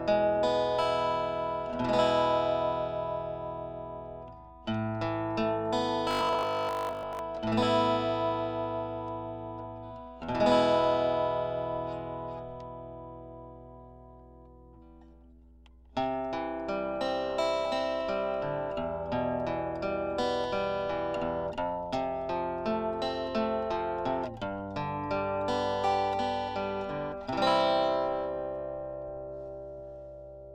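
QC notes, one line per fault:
6.11–7.19 s, robotic sound from repeated short buffers. The sound turns into a rigid, metallic buzz at a fixed 50 Hz for just over a second. Its rough outline survives, but most of the real audio in this stretch is gone. The likely cause is fresh audio arriving too slowly, so playback keeps looping the last fragment instead. A 50 Hz buzz fits a fragment about 20 ms long, repeated back to back.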